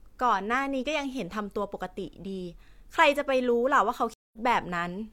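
At 4.14 s, a stream reconnect cuts the speech for 192 ms. The connection restarts, and audio resumes at 4.38 s, skipping roughly a tenth of a second.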